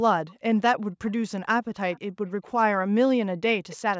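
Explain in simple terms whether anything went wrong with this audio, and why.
Faint, delayed repeats of the speech slip in at 1.07–1.12, 1.92–1.99, 2.27–2.51, 3.69–3.76 and 3.92–3.98 seconds, trailing the original by about 0.3 seconds. That is echo leak: the other end's loudspeaker was likely picked up by its microphone, and its echo canceller let some through.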